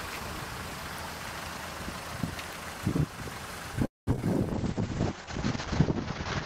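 At 3.85 s the audio stops for about 0.22 s, until 4.09 s. This is a call audio freeze, likely caused by packets stalling in transit until the jitter buffer ran dry. The receiver stretches the last sound into a brief fading tail, then about 0.18 s of silence follows. When the packets arrive, playback resumes exactly where it left off. A 216 ms pause has been inserted, but nothing has been lost.

Right after that come three short concealed packet losses, at 4.13 s, 4.16 s and 4.21 s. Each time, roughly 20 ms of audio failed to reach the decoder in time. The receiver papered over each hole by extending the preceding sound and blending back into the real signal. Because these bursts sit so close together, they come across as a quick cluster of small smears or wobbles just after the freeze, and a short transient could be swallowed.

From 4.52 s to the end, there is a call bitrate drop. The bandwidth estimate collapsed and the encoder was starved of bits. 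The sound points to a fall from a full-band rate to somewhere near 8 kbps. Coding becomes coarse and grainy, and the top end is cut off at 8 kHz, so the audio turns muffled and rough where it was previously crisp up to 20 kHz. It never recovers before the clip ends.

Overlapping that stretch, from 4.74 s to 5.26 s, there is a jitter buffer slow-down. With its reserve running low or its target delay just raised, the buffer rebuilt margin by repeating single pitch periods and fragments of pauses many times over. Playback runs at about 94% speed for half a second, adding 39 ms, while the pitch stays the same. Sounds in that window are slightly drawn out, on top of the already degraded bitrate.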